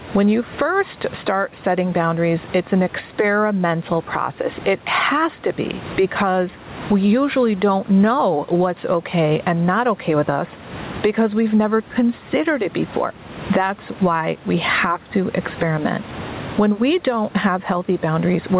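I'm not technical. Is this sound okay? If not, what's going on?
No. Gain pumping runs through the whole clip. The level keeps breathing up and down in large swings. The likely cause is a microphone level set far too high, with an automatic limiter repeatedly pulling it back on every loud moment. This squashes loud and quiet parts together and leaves the speech sounding flattened.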